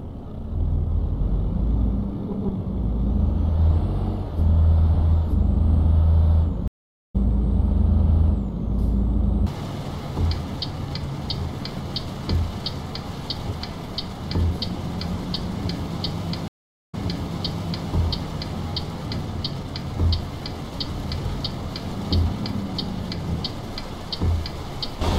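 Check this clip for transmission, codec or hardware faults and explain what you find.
Two stream reconnects: at 6.68 to 7.16 s, 0.45 s of silence then a skip about 0.3 s ahead; at 16.48 to 17.88 s, 0.44 s of silence then 0.97 s repeated. The player lost its connection and restarted decoding mid-stream. Unlike a plain dropout, the audio resumes at a different point.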